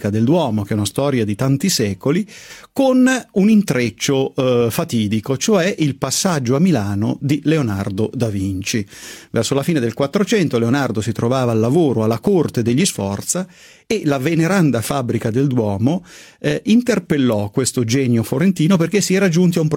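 No technical fault can be heard anywhere in the recording.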